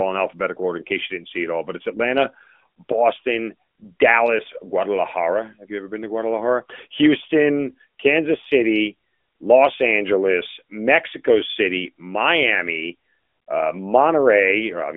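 Nothing in this recording stood out as a technical problem when listened to.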